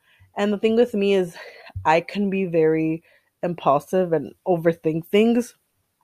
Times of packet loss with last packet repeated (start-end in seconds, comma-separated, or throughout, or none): none